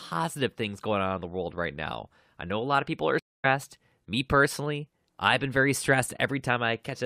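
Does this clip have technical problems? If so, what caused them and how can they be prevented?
Yes. A stream reconnect occurs at 3.19 s. The speech drops out for about 245 ms, until 3.46 s. It resumes roughly 0.2 s further on, because a fresh decoder joined the live stream after the connection broke. Larger client buffering and faster reconnection logic would prevent this.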